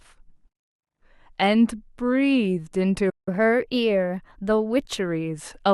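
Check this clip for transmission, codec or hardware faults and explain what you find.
Two related playback faults show up in this speech clip, both tied to the player rather than the recording.

From 3.09 s to 3.28 s there is a playback stall. The sound cuts off mid-flow into clean silence. The likely cause is the player running short of buffered data or having its output thread blocked. Unlike a packet-loss dropout, there is no concealment smear. The audio simply halts, then resumes.

From 3.28 s to 4.99 s comes catch-up at higher speed. The player works through the backlog by resampling at 1.1 times normal rate, so the speech runs quicker and sits about one and a half semitones higher. At 4.99 s it drops back to normal speed. What separates this from wow or a deliberate pitch shift is that tempo and pitch rise together, and that the rise begins immediately after the silence.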